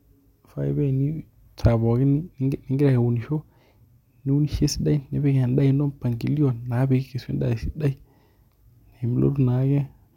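Nothing stood out as a technical fault on listening to this speech recording.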